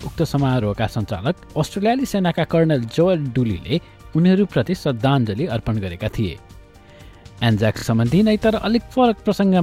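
A brief stutter at 7.77 to 7.83 s comes from repeated frames: one 26.1 ms block, consistent with a single compressed frame, played twice more, adding 52 ms.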